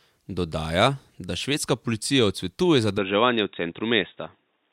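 Input switched to a poorer device at 2.98 s: the speech turns dull, with nothing above 3.8 kHz, likely a narrower-band microphone taking over seamlessly.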